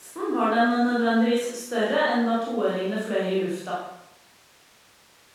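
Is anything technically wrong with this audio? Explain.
No, nothing technically wrong here.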